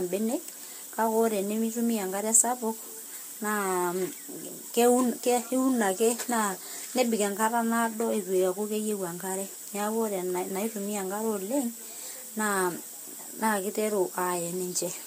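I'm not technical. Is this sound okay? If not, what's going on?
No. The speech was likely squeezed by one lossy codec and then squeezed again by a different one, a fault called transcoding between lossy codecs. Throughout, two layers of compression smear together, and everything above 16.3 kHz is missing, dulling the top end.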